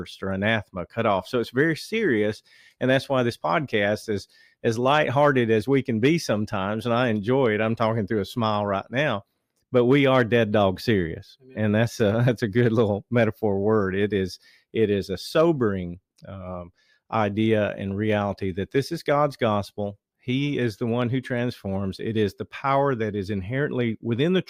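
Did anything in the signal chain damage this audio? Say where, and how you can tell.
No, nothing in this speech recording shows signal-chain damage.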